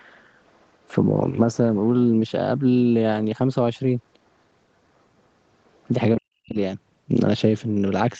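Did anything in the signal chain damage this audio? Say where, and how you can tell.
Yes. The call's echo canceller likely left loudspeaker residue in the microphone signal: the other side's voice leaking through, very faint, at 0.44 to 0.88 s and 5.65 to 5.84 s.

With both sides talking, the canceller likely mistook its own talker for echo. That speech is suppressed in double talk, dropping steeply from 6.18 to 6.57 s.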